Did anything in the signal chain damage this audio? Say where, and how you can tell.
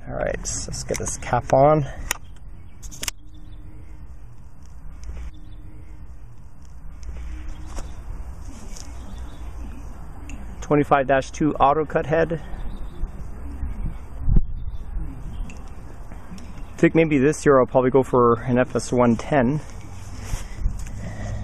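Yes. At the network streaming stage, the player fetched or queued the same segment twice, a stream segment repeated. From 5.28 s to 7.28 s, the preceding 2.0 s of audio plays a second time, marked by a small blip where playback jumps back.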